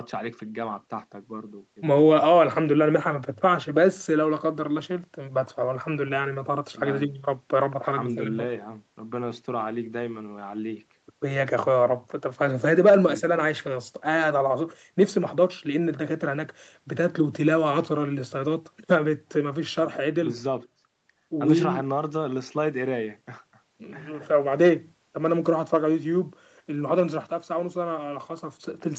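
Speech that has passed through a call's microphone processing and an Opus call path, with its content stopping at about 8 kHz as that path would leave it, and with no technical fault to be heard anywhere in it.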